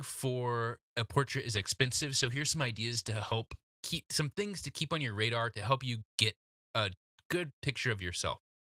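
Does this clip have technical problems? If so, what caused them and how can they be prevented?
Yes. A call bitrate drop from 1.57 to 3.91 s, after "for a portrait is" and before "some things to keep", coarsens the speech, which fits the encoder roughly halving its bitrate. Prevent it with a more stable network connection and more headroom in the bandwidth estimate.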